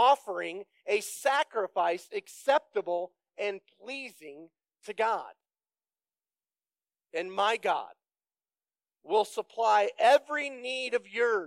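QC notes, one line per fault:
1.79 to 4.63 s, de-emphasis applied wrongly: the top end sags smoothly, sitting about 8 dB lower at 10 kHz than at 1 kHz, so this stretch turns dull and muffled. A treble-cut curve meant to undo pre-emphasis has been applied to material that had none, or applied twice. Unlike a low-pass filter or a codec bandwidth limit, there is no abrupt cutoff: the loss builds gradually across the treble rather than ending at a wall.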